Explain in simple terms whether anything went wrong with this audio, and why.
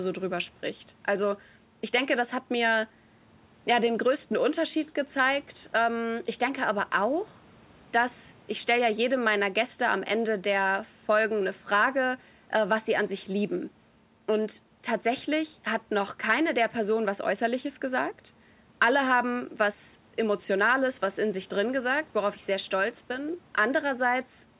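Nothing went wrong that could be heard: the speech comes through a phone-style call connection, which keeps only the lower part of the sound, like an ordinary phone line, and nothing else stood out on listening.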